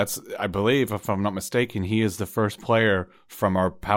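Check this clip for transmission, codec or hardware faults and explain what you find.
One fault is present: word clock ticks. From 0.14 s to 3.89 s, about five sharp ticks occur roughly once a second. The receiving device runs unlocked from the sender's clock, an error of about 20 ppm, so each clock slip misreads samples and drops or repeats one.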